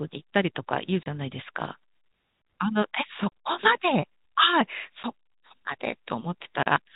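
Packet loss filled with silence hits the speech four times: 1.03 to 1.06 s, 3.29 to 3.32 s, a single short gap at 5.03 s, and 6.63 to 6.66 s. Chunks of the stream never arrived, and the receiver simply played nothing in their place. The three longer holes last 30 ms and the short one 10 ms, which points to 10 ms packets. Each gap starts and ends abruptly, so the speech sounds chopped, while the G.711 telephone band stays audible around them.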